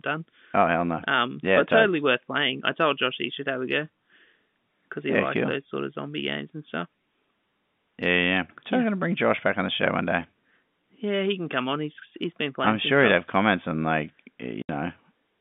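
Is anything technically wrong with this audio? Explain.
Yes. At 14.62 to 14.69 s, just after "have comments on like", there is packet loss filled with silence. The speech drops out for 70 ms, which fits seven lost 10 ms packets, and the receiver inserted silence, so the hole has abrupt edges. The telephone band of roughly 150 Hz to 3.6 kHz comes from the G.711 coding.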